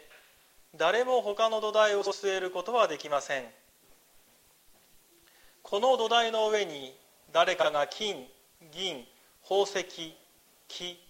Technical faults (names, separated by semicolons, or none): frames out of order